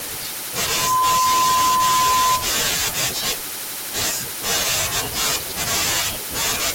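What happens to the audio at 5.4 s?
From 5.4 to 5.52 s, chunks play out of order: one 60 ms chunk arrives a chunk late, so the sound jumbles briefly, though nothing is missing, unlike a dropout.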